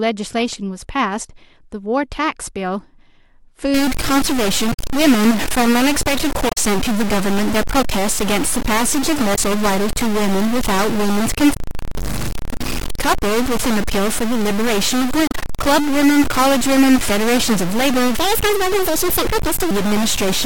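From 3.74 s to the end of the speech, added noise sits on everything, and even the pauses fill with a hiss that tracks the signal's sign. This is the signature of a stuck bit, likely one converter or data line frozen at a fixed value, so roughly half the samples are offset by that bit's weight. On a waveform the quiet gaps no longer return to a flat line but jump between two levels. A spectrogram shows a broadband haze spreading across the whole band wherever there would otherwise be silence.

Five short glitches then cut through the audio, at 4.69–4.79 s, 6.48–6.58 s, 9.32–9.39 s, 11.51–11.57 s and 15.25–15.34 s, each lasting 60 to 96 ms. They are damaged data in a compressed stream. At each point the decoder hits corrupted frames, loses sync and searches for the next valid header. The result is a brief chirp or squawk. A spectrogram shows each one as a narrow vertical smear or a blocky patch that breaks the speech harmonics.

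From 18.18 to 19.71 s, a section plays at the wrong speed, 1.61 times too fast, which raises the pitch by about seven semitones. Speech there sounds hurried and chipmunk-like, likely because that stretch was played against a mismatched clock. The spectrogram shows the harmonics and formants jumping upward and spreading further apart for that span. The waveform's cycles and syllables become visibly compressed in time, then snap back at 19.71 s.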